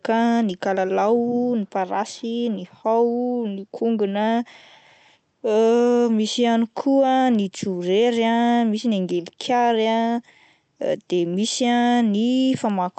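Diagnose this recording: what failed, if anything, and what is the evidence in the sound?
Nothing failed: the speech comes through the call path with its top end stopping at 8 kHz, which fits an Opus link running at about 40 kbps, and no stage from capture to playback shows a fault.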